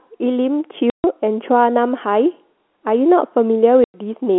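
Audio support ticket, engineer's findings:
Packet loss filled with silence, receive path. Jitter buffer or network dropped consecutive packets; no concealment, receiver inserted silence. Gaps at 0.90–1.04 s (140 ms) and 3.84–3.94 s (100 ms). Both durations divide evenly into 20 ms units, which fits 20 ms packets. Speech cut dead, hard edges at each gap boundary. Surrounding audio is narrowband telephone sound from the G.711 path, with nothing heard above 4 kHz.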